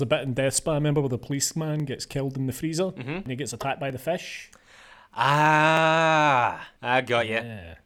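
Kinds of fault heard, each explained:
Dropped samples: sharp clicks at 1.80, 3.90, 5.77 and 6.66 s in the speech, likely from under a millisecond of missing audio making the waveform jump.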